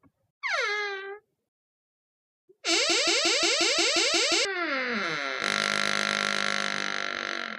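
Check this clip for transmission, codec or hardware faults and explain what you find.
One fault stands out, a broken-record loop from 2.90 s to 4.45 s. A fragment about 178 ms long plays nine times in a row, exactly identical each pass, and whatever sound belonged to that stretch never arrives. The likely cause is a stalled player, encoder or stream that kept resending the last piece it held. On a waveform the segment shows as a stamped, repeating block; a spectrogram shows the same pattern tiled at a steady 178 ms spacing.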